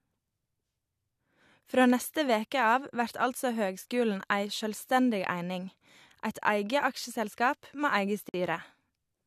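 At 8.29 s, separately encoded pieces of the speech were joined without trimming the encoder's start-up delay and end padding, leaving a gap at a join of encoded pieces. The sound drops into a silence of about 50 ms, ending at 8.34 s, with smeared edges, then resumes where it stopped.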